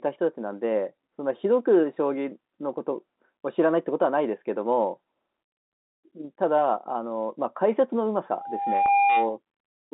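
At 8.3 s a loudspeaker feedback squeal begins. A microphone is picking up the loudspeaker it feeds. At 804 Hz the loop gain rises above one, so that tone keeps feeding itself. It swells over roughly 0.7 s into a steady, piercing whistle. By its peak it stands roughly 5 dB above the speech. It continues until 9.38 s. The narrow telephone band of the G.711 line does not filter it out, since 804 Hz lies well inside that band.

From 8.86 to 8.88 s, during the squeal, there is packet loss with pitch repetition. About 20 ms of audio went missing, which fits one lost packet. The receiver filled the gap by repeating the last pitch period. The gap is short, so the repeat does not fade to silence. It is heard as a brief held, buzzy patch, and then the normal signal returns.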